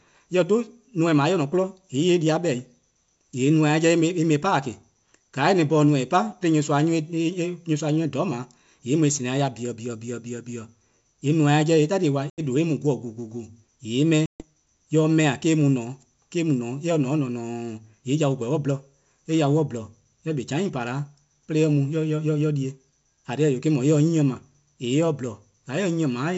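At 12.30 s and 14.26 s there's ADPCM packet loss: holes of 80 and 140 ms, with speech resuming slightly distorted while the decoder's predictor resyncs.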